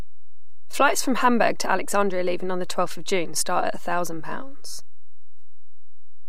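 DC offset runs throughout the speech: the whole waveform sits shifted from zero by a constant of about -22 dBFS, inaudible itself but eating headroom.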